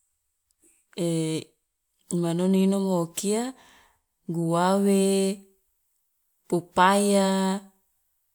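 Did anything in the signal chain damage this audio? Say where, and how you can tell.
No, nothing in the signal chain has left audible damage on this speech recording, and the signal holds steady and continuous at every stage from capture to playback.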